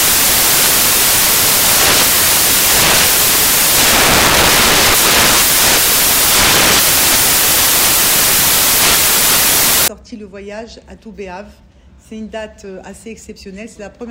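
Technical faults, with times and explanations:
0.0–9.88 s: samples built from the wrong bytes. The bytes of each sample are combined wrongly, so the rapidly changing low-order bits end up as the most significant part of each value. The result is loud, harsh broadband noise.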